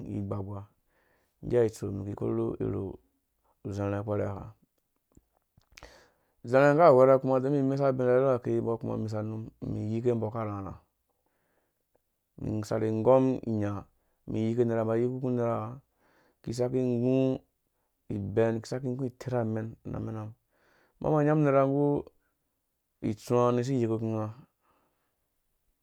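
No technical faults are audible anywhere in this speech recording.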